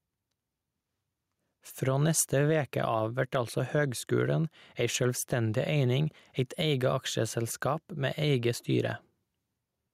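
Gain pumping runs through the whole speech recording: the level swings by around 5 dB, with loud and soft parts pulled closer together so the sound is squashed. The likely cause is input gain set far too high, with a fast limiter or compressor clamping down on each loud syllable and releasing in the gaps. Unlike a noise gate, it breathes up and down in step with the speech.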